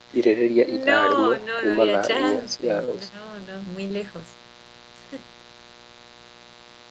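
A mains buzz runs under the speech from start to finish, sitting roughly 20 dB below it. Spikes from something like a dimmer, rectifier or an unshielded lead get in twice per 60 Hz cycle, so the buzz carries a long series of harmonics into the kilohertz range. That gives it a raspy, edged quality, unlike a smooth 60 Hz hum, which stays low and rounded and would mostly disappear with a bass cut.

Short concealed packet loss occurs three times, at 1.71 to 1.75 s, 2.85 to 2.89 s and 3.87 to 3.92 s. Each time, about 20 ms of audio failed to arrive, and the decoder covered the gap by extending the preceding sound before blending back into the real signal. The result is a quick smear or wobble rather than a gap. A plain dropout would instead leave a hard click or a moment of silence. The speech is band-limited at 8 kHz, as the call path's Opus codec sets it, and the coding sounds consistent with a moderate call bitrate.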